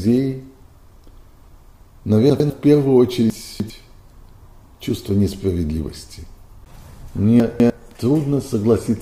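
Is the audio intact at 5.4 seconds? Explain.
Yes, the audio is intact at 5.4 seconds, with no dropout, click, distortion or other fault at that point.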